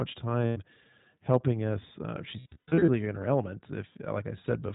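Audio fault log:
Throughout, iLBC codec: the speech is band-limited to narrowband, with nothing above 4 kHz, and sounds slightly rough and synthetic. This fits iLBC at 15.2 kbps with 20 ms frames, each frame's excitation coded independently. Because of that, a lost frame does not smear its errors into the frames that follow.
0.47–0.58 s, lost iLBC frames: a roughly 100 ms gap is filled by a held, slightly buzzy vowel-like sound. The decoder repeats the last pitch cycle mixed with noise. Clean speech returns at once, which marks it apart from codecs whose errors carry forward.
2.40–2.90 s, lost iLBC frames: 320 ms of losses are scattered over about half a second, the longest run around a tenth of a second. Each gap becomes a brief breathy sustained tone that fades on the longer runs. The speech recovers immediately before "in her element".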